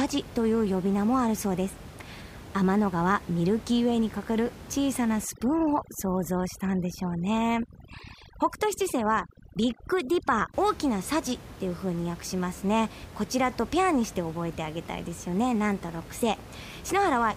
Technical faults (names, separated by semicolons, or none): overdone noise removal